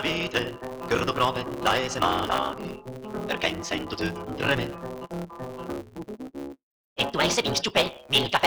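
From start to finish the audio carries a steady buzz at 138 Hz and plays back about 1.6 times too fast, yet its pitch stays close to normal. This is a truncated block size mismatch: one stage hands over longer blocks than the next stage accepts, which fits 512-sample blocks being written, and the tail of every block is discarded. Each cut repeats at the block rate to form the buzz, while the lost material shortens time without shifting pitch.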